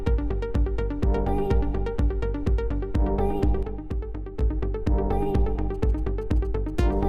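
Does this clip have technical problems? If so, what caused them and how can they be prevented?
Yes. From 3.63 to 4.41 s the level drops abruptly by about 6 dB and then returns. This is most likely one channel dropping out. Once the stereo pair is summed to mono, content shared by both channels loses half its contribution, and anything present only in the missing side vanishes. A fade or gain ride would slope. This is a clean step down and back. Preventing it means checking cables, connectors and interface routing so both channels stay live, and monitoring in stereo before any mono fold-down.

From 5.75 to 6.94 s there is GSM signalling interference: a galloping dit-dit-dit of short buzzes repeating at 217 Hz, roughly 30 dB below the main sound. A nearby 2G phone exchanging signalling bursts with the network causes it. The audio circuitry rectifies that radio energy into audible pulses. 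Mains hum would be a steady 50 or 60 Hz drone. This comes in clustered groups with a buzzy 217 Hz texture. Preventing it means keeping phones away from microphones, cables and interfaces, or switching them to flight mode.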